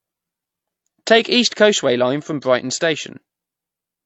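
From start to finish the speech carries the marks of transcoding between lossy codecs, likely an MP3 encode at around 48 kbit/s that was then re-encoded as HE-AAC at around 40 kbit/s. Nothing survives above 7.8 kHz, which is the lower cut-off in the chain. The second encoder spends its bits on the first one's artefacts and then adds its own. It differs from a single low-bitrate encode because the two kinds of artefact are heard layered together.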